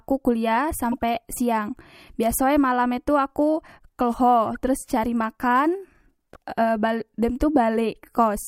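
Corrupt frame decoded at 0.92–0.99 s, 4.45 s and 6.33–6.36 s. Flipped bits in a few compressed frames were decoded anyway, so misread gains put energy at the wrong frequencies. The result is short bursts, the first loudest at about -15 dBFS and the later two near -30 dBFS.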